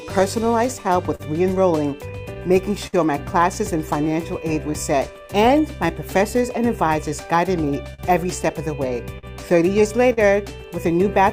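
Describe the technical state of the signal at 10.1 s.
Right around there, the sender's clock is running slow against the receiver's, by something like 4 percent. That clock drift between sender and receiver keeps the jitter buffer hungry for the whole clip, so the timing never quite settles and the sound has a faintly uneven pulse to it.

To cope, the receiver is making repeated timing corrections from 0.43 s to 11.21 s, stretching short pieces so playback runs at about 98 percent speed. Over that stretch it pads in roughly a fifth of a second, heard as slight hiccups and a wobbly tempo rather than clean jumps.

Then at 10.13 to 10.19 s you get a short stall from a late packet: the buffer ran dry, so the receiver held the last sound for 40 ms until the data showed up and carried on from the same spot. Nothing's lost, and delay grows by 40 ms, but that moment drags slightly with a small buzz or dip.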